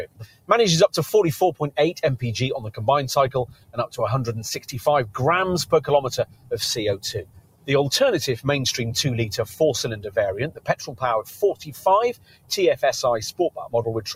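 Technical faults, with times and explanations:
Throughout: noise suppressor applied to music or sounds. A speech-oriented suppressor treats steady tones and tails as noise, so gain swings by roughly 15 dB. Level pumps and thins. The waveform envelope breathes unevenly, and the spectrogram shows sustained bands fading while onsets stay bright.
0.06–0.5 s, 3.46–3.96 s, 6.24–6.53 s, 7.23–7.69 s, 9.43–9.6 s, 9.96–10.11 s, 10.49–12.83 s: sound cut by the noise suppressor. Held or decaying sound here was judged noise and dropped by about 18–19 dB (about 8–10 dB at 9.43 and 9.96 s). Tails vanish abruptly, showing as waveform dips and dark spectrogram gaps.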